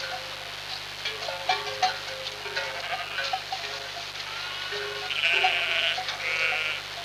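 From the first moment to the last, a mains buzz runs underneath the sounds in this clip. It's raspy and steady, not a soft hum. Something like a dimmer, a rectifier or a missing shield is letting sharp switching spikes in twice per 50 Hz cycle, and those spikes spray harmonics up into the kilohertz range. It sits quite loud, roughly 15 dB below the wanted sound, so you hear it constantly.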